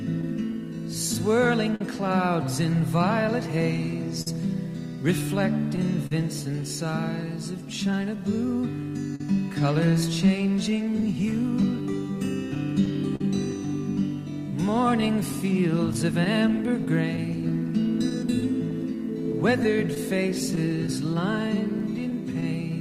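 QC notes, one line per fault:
Throughout: clock drift between sender and receiver. The sending side runs roughly 3 percent slow against the receiver, so the receive buffer keeps drifting toward empty and has to be topped up by stretching the audio. The result is a faint, recurring unevenness in timing across the whole clip rather than any single obvious event, with small hiccups arriving at irregular intervals.
0.21 to 13.21 s: scattered short gaps. Around thirty small holes appear across this span, the longest about 50 ms, with roughly 400 ms patched in total, or about 3 percent of the stretch. Each hole was filled by carrying the preceding sound forward, so nothing drops to silence; instead there are brief smears and ticks where the concealed material joins back onto real audio.
0.73 to 22.71 s: repeated timing corrections. The receiver repeatedly inserts short extensions, running at about 99 percent speed and adding roughly 150 ms over the span, to compensate for the slow sender. 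All edits push in the same direction but are unevenly spaced.
15.01 to 22.43 s: scattered short gaps. A second cluster of about twenty holes, none beyond about 15 ms, adds up to roughly 200 ms filled, again about 3 percent of the span. Because the holes are so brief, the continuation of the previous sound covers them, leaving mostly brief ticks and momentary blurring rather than audible dropouts.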